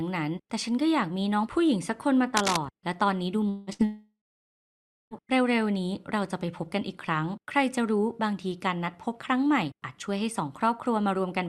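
From 2.34 to 2.60 s a harsh scratching, rustling layer sits on top of the speech, loud enough to reach about 5 dB below the signal itself. This is cable scratch noise, likely from a worn cable, connector or control being moved so that its contact resistance jumped around. On a waveform it shows as ragged, spiky bursts riding on the speech; a spectrogram shows dense, irregular broadband speckle with no harmonic structure.

At 3.49 s a long network dropout begins. Roughly 180 ms of audio likely never arrives, and until 3.70 s the receiver stretches the last sound into a buzz or hiss that fades rather than breaking to silence. The spectrogram shows smeared, repeated bands losing energy, and the waveform shows an envelope that sags before the speech resumes, with that stretch missing.

Between 3.73 and 3.82 s a burst of packet loss removes about 60 ms. The gap is concealed in the same way but only briefly, as a short held buzz or hiss that dips in level before the audio picks up further on. 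It appears as a narrow band of copied, flattened spectrum on a spectrogram and a small smooth-decaying bump in the waveform.

A second, much longer network dropout runs from 3.85 to 5.14 s, likely losing about 1.26 s of audio that never arrived. Concealment fills only the first few tenths of a second with a fading buzz or hiss. After that, roughly 0.95 s is dead silence: a flat line in the waveform and a blank column across all frequencies on the spectrogram. The speech then returns, with the lost portion simply gone.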